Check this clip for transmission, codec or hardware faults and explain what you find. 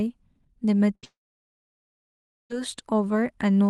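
Two faults stand out, back to back, in this speech carried over an Opus call path whose content stops near 12 kHz.

From 0.95 to 1.05 s there is a burst of packet loss. About 80 ms of audio never arrived, and the receiver stretched the last sound across the gap for roughly 73 ms, fading it down. You hear a brief held, fading sound in place of the real continuation. On a spectrogram it shows as a flat, frozen pattern, and the waveform shows the last sound continuing as it shrinks.

From 1.05 to 2.52 s the audio falls away for nearly a second and a half, most likely a long network dropout. The concealed tail decays quickly, leaving about 1.36 s of silence before the sound resumes further on with that stretch missing. A spectrogram shows a short smeared fade, then a blank band. The waveform collapses to a flat line until the signal returns abruptly.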